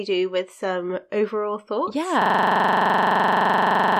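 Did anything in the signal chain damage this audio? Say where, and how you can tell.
Yes. At the driver or buffer stage: a system hang loop begins at 2.22 s, right after "with some overall thoughts", and runs to the end. A 42.67 ms piece repeats exactly, stuttering at 23.4 Hz, which fits a 2048-sample ring buffer replayed after the host froze.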